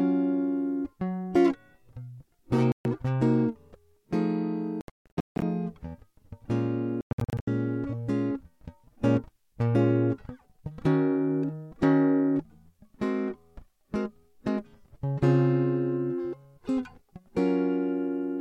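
The music drops out at 2.72 s for about 130 ms, again from 4.81 to 5.42 s with scattered gaps totalling about 510 ms, and from 7.01 to 7.48 s with about 330 ms lost. These are likely Bluetooth dropouts: late packets were discarded, leaving silent holes, visible as blank vertical bands on a spectrogram and flatlined waveform stretches, before playback resumes further along.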